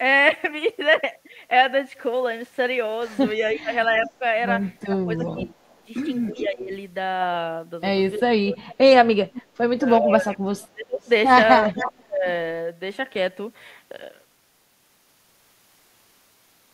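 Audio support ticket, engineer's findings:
Echo leak at 3.49–6.43 s, 8.7–9.43 s and 11.06–11.83 s. Delayed copy of the speech, about 381 ms behind, and 444 ms in the last one. First two about 15 dB under the speech, last one faint, about 35 dB under. Likely far-end loudspeaker pickup not fully cancelled and sent back.

Speech suppressed in double talk at 3.56–6.72 s, 8.17–8.65 s and 9.77–12.26 s. Speech ducks during overlapping talk, dropping about 20 to 30 dB. Roughly a second and a half, a fraction of a second, then about two seconds. Likely echo canceller unable to separate talker from echo, attenuating both.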